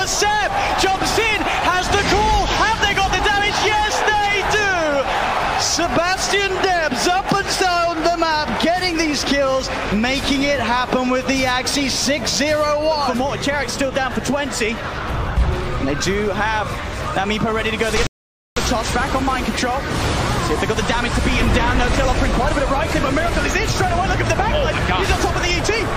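A rebuffering stall interrupts the audio from 18.07 s to 18.57 s. Playback drops to silence for about 0.50 s while the player waits for more downloaded data, then resumes exactly where it stopped, so nothing is lost but that much time is added.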